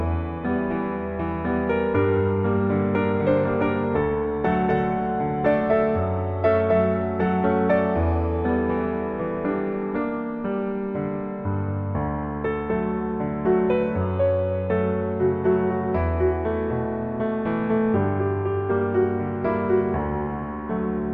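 No technical faults are audible.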